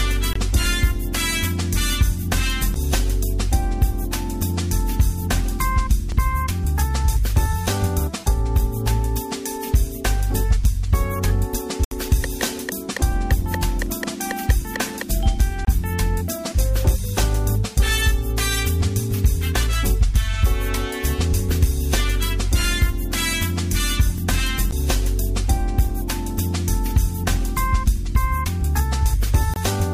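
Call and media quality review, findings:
Bluetooth dropout, four events. Short silent holes at 0.33–0.36 s, 15.65–15.67 s and 29.54–29.56 s, each about 23 ms. Longer hole at 11.84–11.92 s, about 70 ms. Sound resumes further along, as if it had kept playing. Likely cause: packets missing the headphone link's deadline and being discarded. The 23 ms holes fit one lost packet. The 70 ms hole fits three in a row.

Dropped buffer (overrun), two events. Small skip in the sound at 6.12 s, roughly 10 ms missing. Larger jump at 24.18 s, about 20 ms missing. No silence at either point. The audio before and after is butted together. Likely cause: capture side not reading samples before the hardware overwrote them, so a buffer-sized piece is lost.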